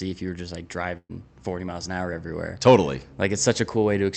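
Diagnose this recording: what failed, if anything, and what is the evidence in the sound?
A burst of packet loss on the network stage of this Opus call path interrupts the audio from 0.97 to 1.11 s, just after "you were just like". The receiver covered about 120 ms by stretching and fading the last sound, then fell silent for roughly 40 ms before resuming with about 120 ms missing. The codec's 8 kHz top end can also be heard.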